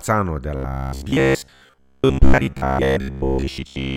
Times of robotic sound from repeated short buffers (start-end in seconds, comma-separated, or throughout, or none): 0.55-3.96